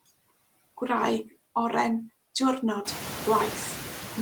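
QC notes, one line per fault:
Throughout, noise suppressor artifacts: the suppressor is treating the room's steady noise as something to remove, pulling it down by about 16 dB in each band, frame by frame. It ducks in the gaps between words and comes back up underneath them as the speech opens the bands again, so the background pumps in time with the talking. That gets easier to hear from around 3 s, when the room noise rises by about 16 dB and sits about 12 dB below the speech.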